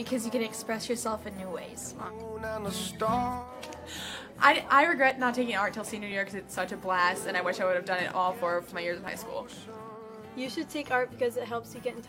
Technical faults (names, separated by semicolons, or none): overlap between stream segments